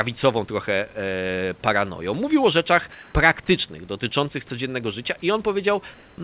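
A speech recording, band-limited with nothing above 4 kHz as a narrowband call codec such as G.711 would leave it, has comfort noise in place of the background in two pauses, from 2.92 to 3.14 s and from 5.94 to 6.18 s. There the room's textured background, about 30 dB below the speech, turns into steady, featureless hiss, about 2 dB louder in the first gap and about 1 dB quieter in the second. This is likely discontinuous transmission with synthetic noise filled in at the receiver. A dropout or noise gate would leave silence instead.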